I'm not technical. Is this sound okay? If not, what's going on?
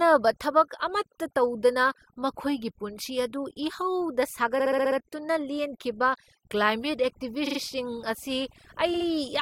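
No. All the way through, the gaps between phrases drop to near silence with twinkling specks. That is overdone noise removal: a clean-up tool set too strong, stripping out quiet parts of the voice along with the background noise.

There are also three stutters, from about 4.58 to 4.97 s, 7.46 to 7.58 s, and 8.93 to 9.06 s. These are repeated frames: a tiny slice of audio, under a fifth of a second long, gets played again two to six times in a row.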